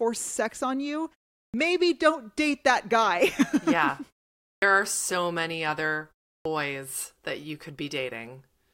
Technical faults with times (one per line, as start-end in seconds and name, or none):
1.48-1.54 clipped start after a pause
4.56-4.62 clipped start after a pause
6.40-6.45 clipped start after a pause